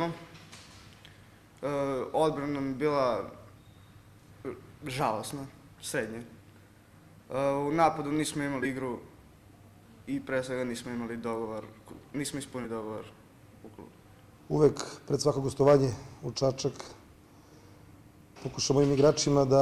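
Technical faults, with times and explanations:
Throughout: filter restarted on every block. The filter starts each block from silence, so a small transient recurs as an 86.1 Hz buzz, which fits a 512-sample block, tracking the level.
8.59–8.66 s: compressed frames skipped. Roughly a tenth of a second of audio is missing, and the audio jumps ahead at the join.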